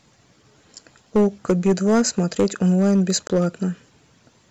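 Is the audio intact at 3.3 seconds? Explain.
No. From 3.27 to 3.30 s the sound cuts to about 23 ms of silence and then resumes. This is likely a Bluetooth stall: the headphone buffer ran dry until delayed packets arrived. Hard clipping also runs throughout, including this moment. Peaks are driven about 7 dB past the converter's limit and a small share of samples are flattened, giving distortion on peaks.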